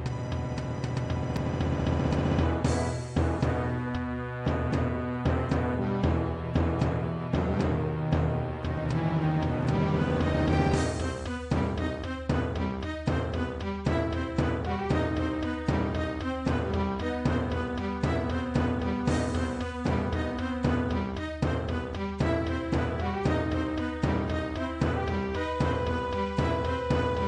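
No technical fault can be heard anywhere in the audio, with the signal holding steady and intact throughout.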